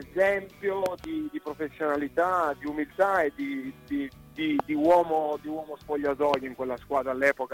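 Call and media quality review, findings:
Loud pop, three hits: a quick double pop at 0.86 to 1.06 s, about 15 dB over the signal, then single pops at 4.60 to 4.62 s and 6.34 to 6.36 s, about 20 dB over. Sound runs on underneath. Likely a plug, switch or driver glitch putting voltage spikes into the signal chain.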